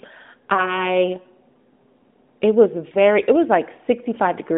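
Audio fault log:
0.54–0.86 s and 2.92–2.97 s, lost AMR speech frames: a single 20 ms frame is missing each time, and the decoder bridges it by repeating the last good pitch and vocal-tract settings at reduced gain. This gives a brief warble or dip rather than silence or a click, which sets it apart from a plain dropout. The second falls between "it was" and "it was", within 12.2 kbps AMR narrowband audio limited to about 200 Hz–3.6 kHz.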